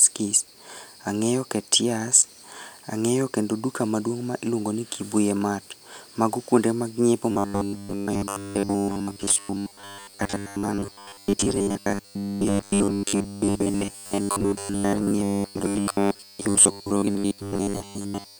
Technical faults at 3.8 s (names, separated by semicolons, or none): none